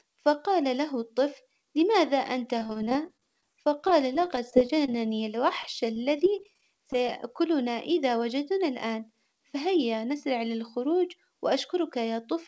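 From 2.59 to 5.21 s, just after "له الطفل لماذا أنت", repeated packet loss (robotic sound) sets in. Many short holes follow one another, none longer than about 25 ms. Each is patched by stretching the last sound, so about 16% of the span is filled-in audio. The speech turns choppy, with pieces missing. A second burst runs from 5.63 to 7.10 s, with fewer and shorter gaps. Nothing is heard above 8 kHz, which fits a wideband call codec such as G.722.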